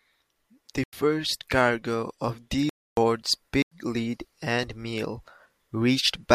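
Three times the speech drops abruptly into dead silence: at 0.84 to 0.93 s, at 2.69 to 2.97 s, and at 3.62 to 3.72 s. Each is a block of digital silence, where samples were replaced by zeros without any fade. The short holes last about 93 ms, which fits a 4096-sample output buffer that the program didn't fill in time. The longer hole is about 279 ms, exactly three times as long as the short ones.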